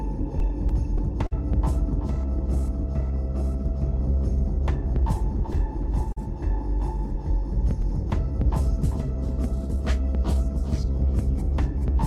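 Clock drift between sender and receiver runs through the whole clip. The sender's clock runs roughly 4% slower than the receiver's, so the jitter buffer keeps draining and the receiver must keep padding the stream to stay in step, producing small, irregular timing hiccups.

Repeated timing corrections span 0.20 s to 11.94 s. Because the sender is slow, every edit goes the same way: the receiver repeats short pieces, playing the material at 97% speed and adding roughly 300 ms overall. These corrections come at uneven intervals and are heard as a faintly unsteady tempo.

Scattered short gaps fall between 0.40 s and 1.33 s. Around four packets arrived too late, and the receiver covered each hole by extending the preceding sound. The patches total about 70 ms, the longest around 50 ms, and nothing is lost outright. They are heard as brief ticks and smears.

A short stall from a late packet occurs at 6.12 s to 6.18 s. 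The buffer ran empty, and the receiver held the last sound for 42 ms until the packet arrived, then resumed from the same point. Playback delay rose by 42 ms. It sounds like a brief held sound with a slight buzz or dip.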